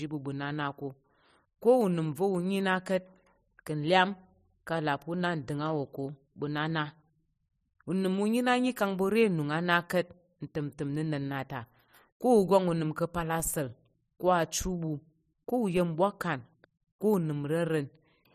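A low thump or click cuts in at 13.40 s, between "unəm ka̱pal" and "asa̱l ko achi ɓu", and again at 15.77 s, between "ko achi ɓu ko" and "yen bwakan ko", while the speech carries on unchanged. Both are DC steps: the waveform's zero line suddenly jumps, as when a converter recalibrates or an input carrying an offset is switched in. Each offset then decays away, drained by a 20 Hz high-pass filter.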